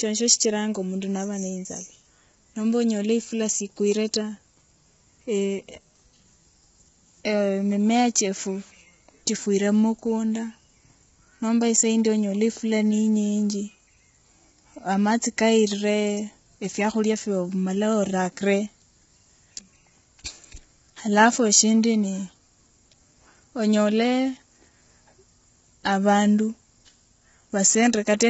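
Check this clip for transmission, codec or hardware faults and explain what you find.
One codec fault runs through the whole recording: low-delay AAC compression.

It is present from start to finish. The speech sounds rough and grainy. Noise fills the gaps between the pitch harmonics. Nothing is heard above 7.7 kHz. The likely cause is AAC-ELD, the low-delay coder used in video calls. Its short frames cannot separate closely spaced harmonics well, and they spend bits quickly. The heavy damage points to a low bitrate, around 16 kbps.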